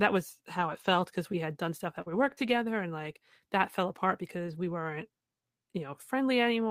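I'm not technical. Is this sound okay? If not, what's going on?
No. There are three kinds of network glitch in this speech, clustered around two seconds.

Lost packet rebuilt from error correction, at 0.57 to 0.95 s (just before "because we had done"), 2.06 to 2.32 s, 2.38 to 2.52 s, and 4.46 to 4.72 s (right after "like that fell apart"). Chunks of the call went missing in transit, but each following chunk carried a spare, lower-quality copy. The receiver played those copies, so nothing drops out, but those stretches sound rougher and grainier.

Burst of packet loss, at 2.01 to 2.08 s, right after "we had done stuff". Several chunks in a row never arrived in time. The receiver stretched the last bit of sound for about 46 milliseconds while fading it, which gives a brief held buzz or fading hiss. About 40 milliseconds of the real speech is simply missing when it picks up again.

Short concealed packet loss, at 2.34 to 2.38 s. 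A sliver of about 20 milliseconds didn't arrive. The receiver patched it by continuing the preceding sound for about 25 milliseconds and then blending back into the real audio. You hear a tiny smear or wobble, and a quick consonant can disappear.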